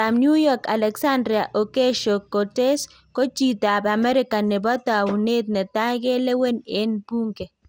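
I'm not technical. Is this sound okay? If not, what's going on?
No. Generation loss runs through the whole clip: the speech sounds swirly, hollow and smeared, with softened consonant edges and nothing above 16.7 kHz. It was likely compressed with MP2 about five times over, each pass adding fresh damage.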